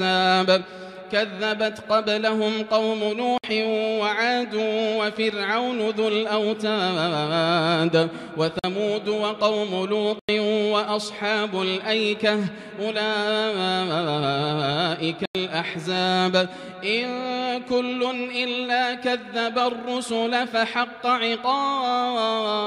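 Blocks of digital silence at 3.38, 8.59, 10.19 and 15.26 s: the output buffer went unfilled and zeros replaced the sound, about 46 to 93 ms each, the last three being whole 2048- and 4096-sample blocks. Each is a short hole.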